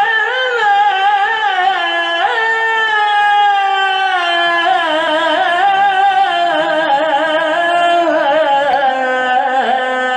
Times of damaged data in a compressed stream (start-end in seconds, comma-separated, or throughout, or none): 5.06, 8.73